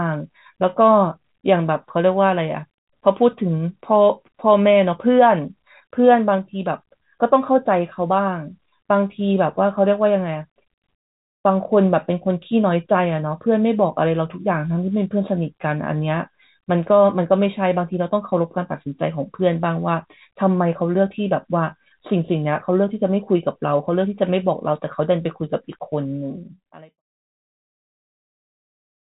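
No technical faults can be heard in this speech clip; the telephone-band sound and the gentle fade-out ending around 27 s are normal.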